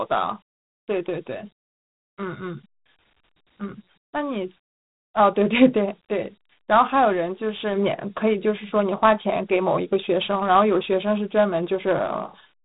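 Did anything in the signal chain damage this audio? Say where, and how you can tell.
Yes. Throughout the speech a gritty hiss rides along with every syllable, and nothing sounds above about 3.8 kHz. That points to the codec stage: Dialogic VOX ADPCM, coding each sample as a 4-bit step, which fits 32 kbps at 8,000 samples a second. Its coarse quantisation leaves plainly audible grit.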